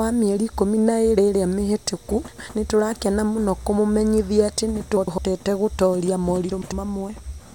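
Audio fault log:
2.28–2.49 s, 4.97–5.18 s, 6.51–6.72 s: frames out of order. In each case two neighbouring blocks of about 0.1 s were decoded in swapped sequence, so the speech plays its later half before its earlier half. The result is a brief garbled flutter, and no time is lost. On a spectrogram, formant tracks break and jump back; the waveform shows abrupt discontinuities at each seam.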